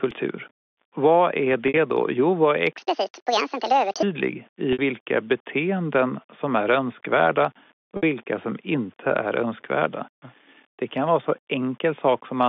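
Right from the start there's a grainy, signal-following grit under the speech, worst in the quiet tails and pauses between phrases. That's low bit depth without dither. The roughness sits roughly 35 dB under the speech and changes texture as the level moves, which points to the audio likely being rounded to about 8 bits with no dither to smooth the steps. It rides on top of the narrow telephone band from the G.711 line, which itself sounds clean.

At 1.68 s there's the first packet loss with pitch repetition. For about 60 ms the receiver fills the gap by looping the last pitch period, so you get a brief held, slightly buzzy tone before the speech picks up again. The length fits two lost packets.

Right after "vad är", from 2.77 to 4.03 s, a section at the wrong speed kicks in. It runs 1.75 times too fast, so the voice jumps up by close to ten semitones and sounds chipmunky and rushed. The likely cause is that stretch being played against the wrong clock. 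Normal speed returns at 4.03 s.

The same 60 ms held buzz comes back at 4.73 s, just before "vilka beteenden som är", and again at 7.97 s, between "beteenden som är önskvärda" and "vilka som inte är". Each one is another two-packet gap patched by pitch repetition.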